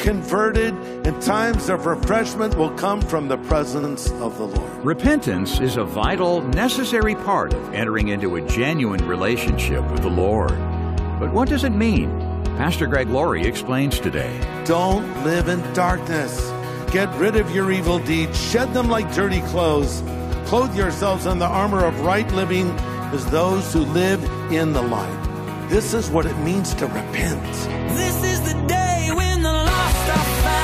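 At 3.82 s the sound stutters: a short slice, about 70 ms, plays a second time before the audio moves on. At 10.18 s a briefer hiccup repeats about 23 ms. Both are repeated frames: a run of compressed frames was written or sent twice, so the decoder played the same stretch again. The first repeat fits three frames and the second fits a single frame, and each adds its repeated time to the clip's length.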